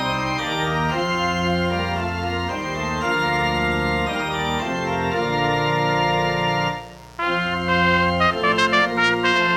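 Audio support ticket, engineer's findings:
Steady raspy buzz under the sound, whole clip, roughly 25 dB below signal. Mains buzz: 60 Hz harmonics from switching spikes twice per cycle, dimmer, rectifier or missing shield.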